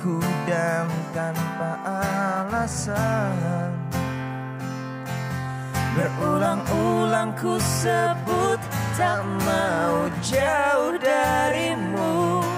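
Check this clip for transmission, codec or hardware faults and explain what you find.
I find no faults to explain in this clip.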